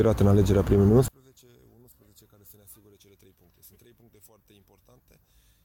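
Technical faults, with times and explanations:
1.08 to 5.65 s, one channel inverted: the sound abruptly drops by about 35 dB and nearly vanishes, leaving only a faint remnant until the end. The likely cause is one stereo channel with reversed polarity, so material common to both channels cancels when they are summed to mono.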